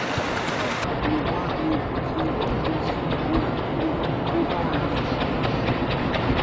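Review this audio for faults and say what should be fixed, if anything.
From 0.84 s to the end, a wrong sample rate plays everything at half speed and an octave low, fitting 32 kHz material clocked out at 16 kHz. Make sure playback rate matches the recording, or resample first.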